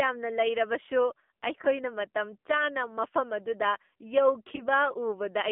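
A speech recording carried over a narrowband mobile link, with the AMR narrowband mobile codec audible throughout. The band runs from about 200 Hz to 3.5 kHz, so a spectrogram shows a hard ceiling near 3.5 kHz with nothing above and little energy under 200 Hz. The voice is plainly buzzy and synthetic, consistent with a low AMR-NB rate of around 7.4 kbps. At that rate the few excitation pulses per subframe give a coarse, metallic texture, visible as smeared, blocky harmonics. There are two lost AMR speech frames, each a single dropped 20 ms frame. The first is heard from 1.62 to 1.68 s and the second from 4.56 to 4.67 s. At each one the decoder repeats the last good pitch and vocal-tract settings at falling gain, producing a short warbly dip. The waveform shows a brief, smoothly shrinking envelope there, and the spectrogram shows a patch of frozen, repeated harmonics before normal detail returns somewhat roughly.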